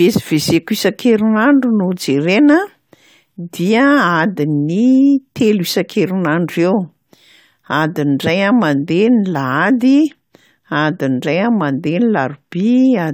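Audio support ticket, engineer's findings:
No faults found in the speech recording; nothing audible points to a failing component or an action needed on this ticket.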